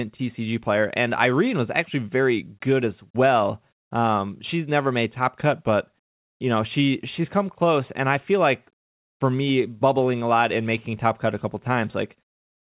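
No faults are audible; the speech comes through a call path whose band stops at 4 kHz, consistent with a narrowband G.711 mu-law codec at 64 kbps.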